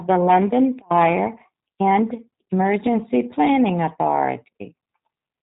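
G.729 codec damage runs throughout. Nothing passes above 3.8 kHz. Speech rebuilt from a filter and sparse pulses sounds rough and synthetic, fitting 8 kbit/s.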